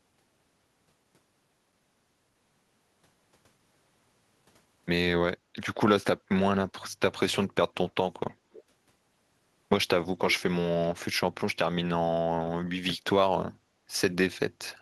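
A speech recording with two kinds of fault. At 5.41 to 5.54 s the background is gated by the echo canceller: the room sound dips by about 10 dB for roughly a tenth of a second and then returns. Unlike a dropout, the speech itself is not cut; only the ambience sinks while the canceller holds the microphone down. At 8.52 to 8.64 s and again at 10.3 to 10.43 s, a short delayed copy of the speech trails it by 281 ms, faint the first time and louder but still well below the speech the second. This is likely echo leak from a loudspeaker path that the canceller did not fully remove. Room reverberation would instead be a continuous smear right behind every syllable, not a distinct repeat at a fixed delay.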